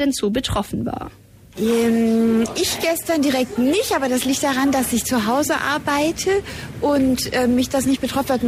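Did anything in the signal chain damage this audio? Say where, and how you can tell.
No, nothing in this audio points to damage anywhere along the signal chain. There is no moment where any stage, from the wiring through to playback, leaves an audible mark.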